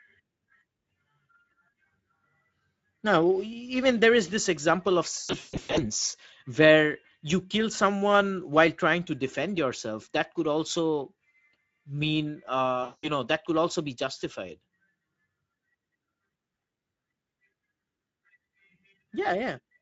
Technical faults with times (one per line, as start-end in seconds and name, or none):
0.00-19.82 Speex codec
5.17-5.82 VoIP packet loss concealed by the speech codec
12.83-13.09 VoIP packet loss concealed by the speech codec